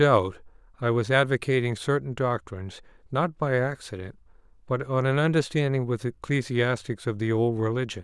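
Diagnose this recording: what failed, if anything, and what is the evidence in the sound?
Nothing failed: no stage from capture through playback leaves an audible defect anywhere in the speech.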